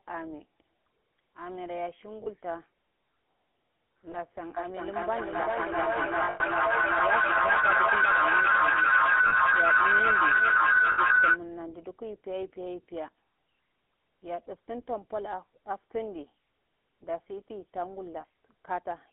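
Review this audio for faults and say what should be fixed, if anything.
Throughout the recording the speech has the buzzy, gravelly roughness of the GSM full-rate codec, and the band is held to roughly 250 Hz to 3.4 kHz, which fits the 13 kbps full-rate coder. It models the vocal tract and drives it with a sparse, regularly spaced pulse excitation, so the texture is a grainy buzz rather than the watery swirl of a modern low-bitrate codec or the dull muffling of a plain low-pass filter. To prevent it, carry the call over a wideband codec such as AMR-WB or Opus instead of GSM full rate.

Lost GSM frames break in at 2.24–2.27 s, 4.12–4.16 s, 6.24–6.41 s, 9.28–9.33 s, 10.92–10.99 s and 18.20–18.25 s. Each gap is bridged by repeating the last good frame, giving a brief rough, metallic ring. The 6.24 s cluster is worst, with about 140 ms lost in runs up to roughly 0.1 s. Unlike a dropout, no silence or click cuts in, and unlike a stutter, no sound is replayed. 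To prevent it, improve the radio link or add stronger channel error protection.

Feedback howl builds from 4.57 s to 11.43 s, a tone around 1.5 kHz that grows to about 12 dB above the speech, with a loop delay of about 0.4 s. Two devices in one room on the same call form a loop, and each pass through it adds level until only the loop's favoured frequency remains. Echo fades with each repeat, but this grows, and it stops only when the loop is broken. To prevent it, mute or disconnect all but one device sharing the room.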